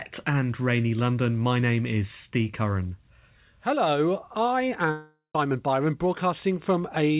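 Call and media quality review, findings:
Long network dropout, 4.91 to 5.35 s: speech cuts out, last sound carried on as a fading buzz for most of the gap, then about 130 ms of silence before audio resumes minus the lost bit. Likely packet loss, receiver concealment stretching the last frame. Band tops out at 4 kHz, fits G.711.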